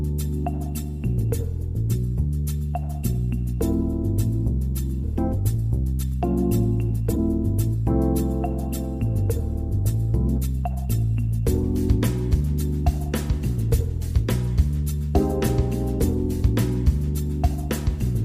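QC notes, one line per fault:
5.03 s, skip ahead: playback jumps straight past about a second of audio with no gap, joining the two sides almost directly. Whatever was there got dropped while later audio was already queued, so the sound just lurches forward.
5.16 to 6.22 s, 7.10 to 7.19 s, 10.38 to 10.87 s, jitter buffer speed-up: the buffer was holding too much, so the receiver trimmed tiny pitch-period chunks back to back. It runs at 108%, then a brief 180% burst, then 119%, shaving roughly 0.1 s, 0.07 s and 0.1 s. Pitch holds but things sound hurried.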